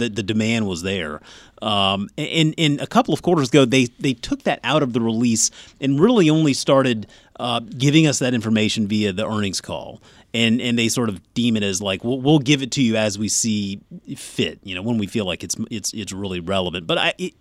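No fault is audible anywhere in this speech recording.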